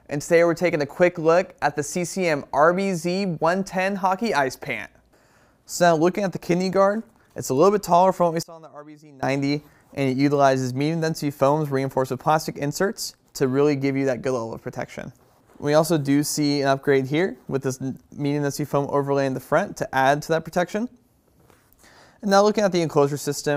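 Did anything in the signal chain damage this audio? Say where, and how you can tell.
Yes. Between 8.43 and 9.23 s the sound collapses. For about 0.8 s the level falls by about 24 dB, and what remains is faint. The centred content drops away, leaving only the difference between the channels. This is the signature of one channel inverted. The likely stage is the analogue wiring, where a swapped polarity on one leg flips that channel. When the two channels are summed to mono, their common content cancels.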